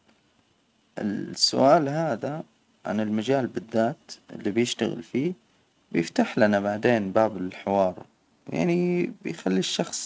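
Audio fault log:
Speech arrives by way of a call's microphone processing and a G.722 call path, with nothing above 8 kHz and the codec's usual coding noise as the only marks of that path, and no faults can be heard.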